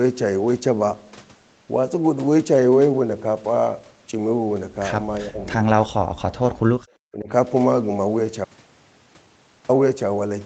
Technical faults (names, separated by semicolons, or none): speech suppressed in double talk